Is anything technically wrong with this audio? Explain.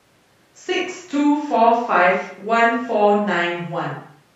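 No, nothing technically wrong can be heard anywhere in this speech recording.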